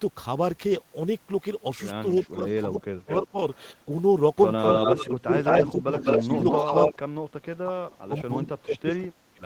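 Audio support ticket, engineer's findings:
Speech suppressed in double talk: speech dips and breaks up, up to roughly 30 dB down, 2.14–3.37 s and 4.85–9.43 s. Likely the echo canceller mistaking near-end talk for loudspeaker echo during simultaneous speech and attenuating both.

Echo leak: delayed copy of the speech, 200 ms behind. Nearly as loud as the speech at 2.8–3.61 s, equally loud at 4.58–6.94 s, a very faint scrap at 8.93–8.97 s. Likely residual loudspeaker pickup the far-end echo canceller failed to remove.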